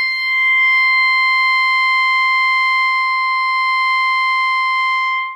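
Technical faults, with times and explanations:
No technical faults turn up anywhere in this bit of music, so there's nothing to flag here.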